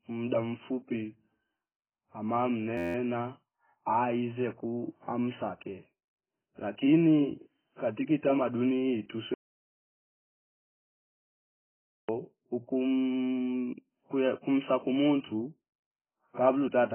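A speech recording whose whole duration is band-limited, with nothing above 3.1 kHz, and sounds dull, smeared and warbly, most likely from heavy AAC compression at a very low bitrate, around 12 kbps. From 2.78 to 2.95 s a system hang loop repeats one 11.6 ms fragment fifteen times, giving a steady buzz at 86 Hz that fits a 512-sample buffer.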